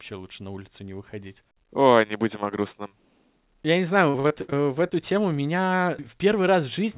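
From 4.10 to 4.93 s, just before "тему меня", repeated packet loss (robotic sound) makes the speech choppy. Seven gaps, the longest 59 ms, are filled by extending the preceding sound. A spectrogram shows smeared, repeated frames and brief dropouts, all below 4 kHz.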